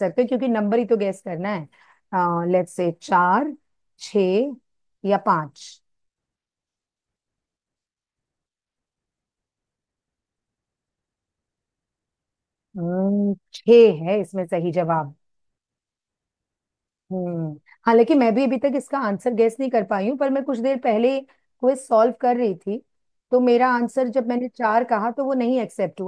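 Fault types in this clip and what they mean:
No technical faults are audible anywhere in the speech recording.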